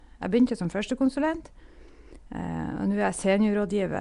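Nellymoser compression, running through the whole clip: the speech carries a rough, hissy halo and a smeared, underwater quality from start to finish, with nothing above 10.6 kHz. This is most likely the old Flash microphone codec, Nellymoser Asao, coding short blocks at a fixed two bits per sample, so weaker bands get no bits and are filled with noise instead. The damage is plainly audible and fits a rate around 44 kbps.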